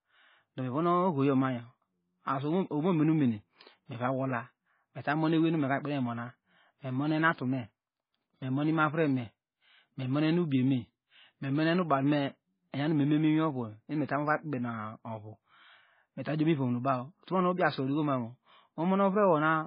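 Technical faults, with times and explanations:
Throughout, MP3 compression: the speech has nothing above 5 kHz, and what remains sounds watery and swirly, with metallic chirps on s sounds and smeared consonant attacks. This is likely heavy MP3 coding at a very low bitrate, around 16 kbps. Starved of bits, the encoder cuts all treble above a fixed frequency and zeroes weak frequency lines, which then flicker on and off between frames and leave the remaining sound unstable and burbling.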